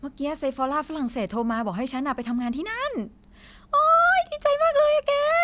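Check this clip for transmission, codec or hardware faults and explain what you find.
No faults heard here.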